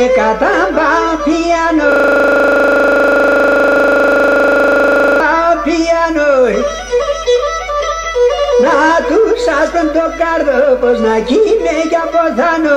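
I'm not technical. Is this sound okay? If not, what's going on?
No. From about 1.92 to 5.20 seconds there's a system hang loop. The computer stalled, and the sound hardware kept replaying the same 40 ms scrap, 82 times over. That's 25 repeats a second, so you hear a rapid, buzzy stutter.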